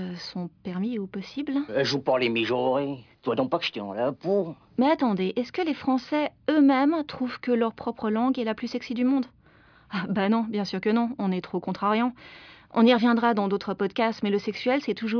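No technical faults can be heard anywhere in this speech recording.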